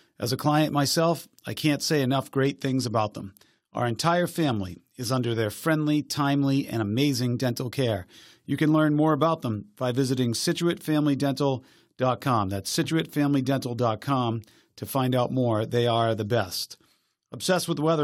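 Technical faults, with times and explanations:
2.44–5.33 s and 16.34–18.03 s, Bluetooth SBC bit pool drop: After "I can't say enough" and again after "are the", the speech turns dull and gritty. The first stretch clears by "their friendly timely and". The second lasts to the end. The encoder starved its upper sub-bands and quantised the rest coarsely, which fits a bit pool cut from 28 to 13, near 102 kbps.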